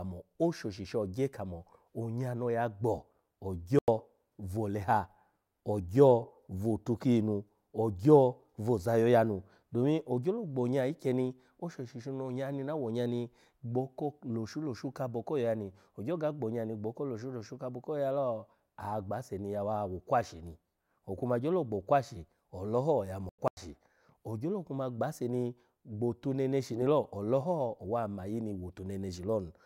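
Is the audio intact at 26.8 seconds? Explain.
No, at 26.8 s you're inside a corrupt FLAC frame, from 26.73 to 26.86 s, just after "ni gbo otu neneshi". Flipped bits sent the decoder's prediction off from the damaged bit on, giving an error peaking at about -30 dBFS before "ole ho owa mayi".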